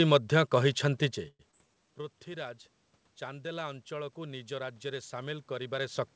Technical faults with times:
1.28-1.41 call audio freeze
1.51-1.55 short concealed packet loss
1.67-2.03 jitter buffer slow-down
3.25-6.15 automatic gain rising

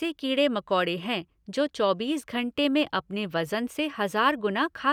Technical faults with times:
none

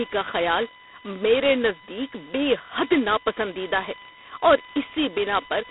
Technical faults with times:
0.00-5.70 USB whine
0.00-5.70 G.726 ADPCM

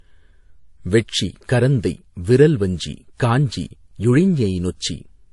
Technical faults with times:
0.00-5.33 transcoding between lossy codecs

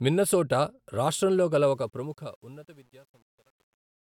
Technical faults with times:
1.63-4.08 truncation distortion on a fade

